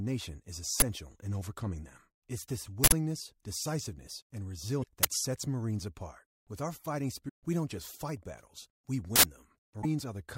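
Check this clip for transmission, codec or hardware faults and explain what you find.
Damaged data in a compressed stream occurs three times in the speech, at 4.80–4.86 s, 7.25–7.30 s and 9.78–9.85 s. Corrupted bytes make the decoder misread frames and lose sync until it finds the next frame header, producing brief chirps or squawks of about 50–70 ms.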